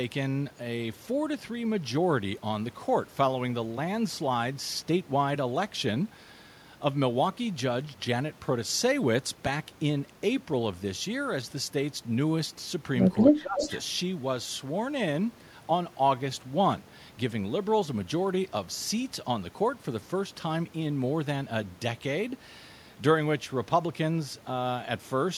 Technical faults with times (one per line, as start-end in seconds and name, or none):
13.34-13.66 speech suppressed in double talk
13.60-13.79 echo leak